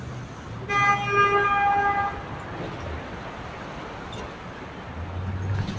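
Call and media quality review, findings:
Noise suppressor applied to music or sounds, throughout. Sustained content and decays ducked by around 10 dB while onsets pass, giving pumping and thinned tails. Speech-tuned suppressor misreading steady tones and ambience as noise. Waveform: envelope collapsing right after each attack. Spectrogram: gaps in sustained bands. G.722 call path audible as content stopping at 8 kHz.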